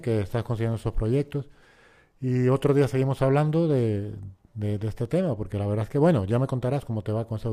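No technical faults are audible.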